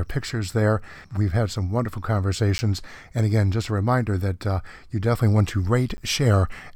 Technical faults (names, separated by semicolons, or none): block of digital silence